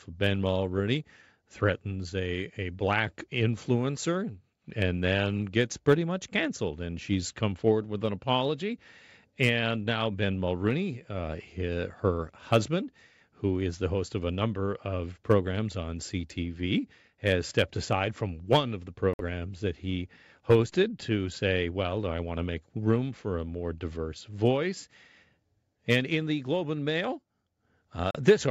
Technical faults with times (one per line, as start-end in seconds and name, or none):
19.13-19.21 Bluetooth stall
28.11-28.16 Bluetooth stall